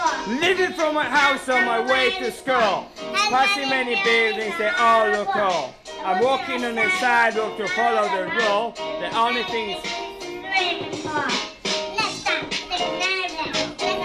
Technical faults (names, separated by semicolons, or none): time-stretched section